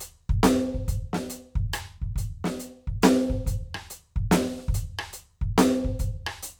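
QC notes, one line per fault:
No faults heard anywhere in the music.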